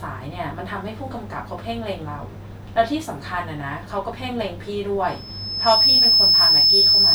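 Speech, with loudspeaker feedback squeal from 5.09 s to the end: a 5.2 kHz tone swells over under a second, reaching about 10 dB above the voice, drawn as a bright horizontal spectrogram line.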